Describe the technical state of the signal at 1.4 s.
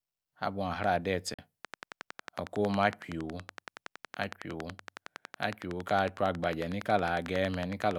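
Just before 1.4 s the speech drops to silence from 1.34 to 1.39 s, a Bluetooth dropout most likely caused by audio packets reaching the headphones too late and being discarded. About 44 ms of sound is lost, which fits roughly three missing packets. Unlike a buffer underrun, which stalls and then continues from where it stopped, the speech comes back further along, as though it had kept playing through the gap.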